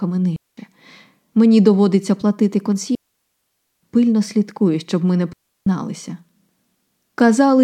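At 0.36 s, 2.95 s (after "доводиться платити") and 5.33 s (after "слідкує щоб ми не"), the speech drops out for 0.21 s, 0.87 s and 0.34 s: digital wireless dropouts, where the receiver mutes after losing data. Clean silent holes with no hiss or noise bursts set them apart from analogue radio dropouts.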